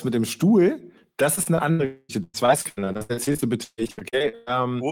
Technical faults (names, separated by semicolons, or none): repeated packet loss (robotic sound); long network dropout